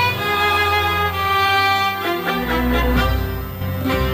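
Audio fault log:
throughout: switching supply whistle, a thin high tone drifting between 14.47 and 14.57 kHz, roughly 20 dB below the sound, from a power converter cycling at an audible rate. Unlike a fixed-pitch interference whistle, its pitch wanders slightly as the supply's load shifts.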